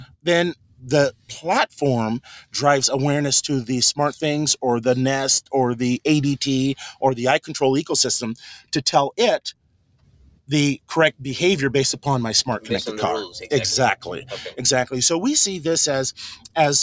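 A noise suppressor built for speech is left on for the whole clip and is acting on this non-speech audio. It treats sustained and decaying parts of the sound as noise, so the level keeps swinging by roughly 10 dB. Onsets pass largely intact while held portions and tails are pulled down, giving an audible pumping, fluttering quality. The bandwidth stops at 8 kHz, as the call's microphone processing leaves it.

Within that, there are five distinct spots of sound cut by the noise suppressor, where it clamps down harder. These fall at 0.00–0.26 s, 0.55–0.89 s, 1.11–1.31 s, 9.53–10.5 s and 16.36–16.56 s, with the deepest drops reaching about 17 to 19 dB. The longest is the stretch around 9.5 to 10.5 s, where roughly a second of sound sinks.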